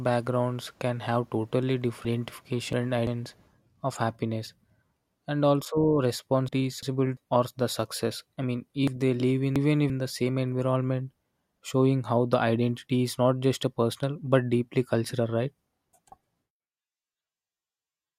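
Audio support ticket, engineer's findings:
Chunks out of order, three events. Buffer of about 0.34 s delivered late and played after its successors, 2 chunks late at 2.05–3.07 s (after "can have totally") and 8.88–9.90 s (after "I mean"), 1 late at 6.49–7.17 s (before "or the"). Jumbled speech.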